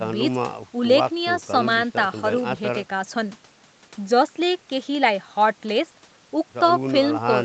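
Speech, with no audible technical faults.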